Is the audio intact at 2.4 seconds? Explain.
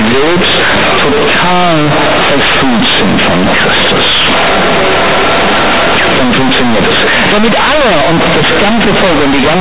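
No. At 2.4 s, as throughout, companded audio is read as linear: A-law bytes play unexpanded, giving loud buzzy distortion, a waveform bent out of shape, and spectrogram noise filling pauses.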